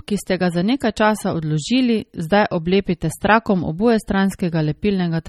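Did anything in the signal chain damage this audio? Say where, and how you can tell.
Yes, codec stage: likely MP3 compression at what sounds like 32 kbps, leaving plainly audible watery swirl throughout and nothing above 18.6 kHz.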